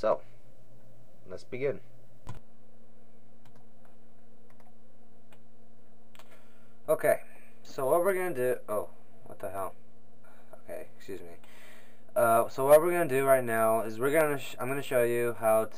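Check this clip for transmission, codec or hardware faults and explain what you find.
I found no faults when I checked this clip.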